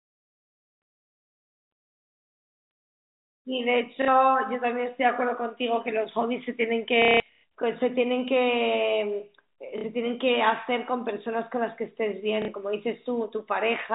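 Packet loss with last packet repeated: the receiver lost audio and replayed its last packet to fill the gap. Short 60 ms gaps at 4.02–4.08, 9.78–9.84 and 12.42–12.48 s, which fit roughly 30 ms packets, each give a brief stutter. At 7.02–7.44 s, 330 ms is lost across 420 ms, with a longest run of 180 ms, so the repeats pile into an audible robotic buzz. The G.711 telephone band stays intact around these drops.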